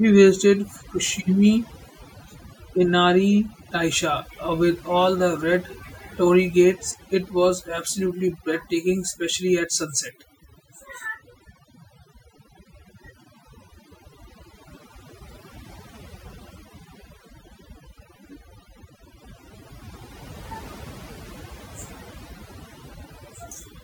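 Overdone noise removal runs throughout the recording. A noise reduction stage set far too aggressively treats any frequency band close to its estimate of the background noise as noise and pulls that band down hard or shuts it off entirely. The quieter detail of the speech gets caught along with the noise, so the gaps fall to near silence scattered with twinkling, chirpy specks.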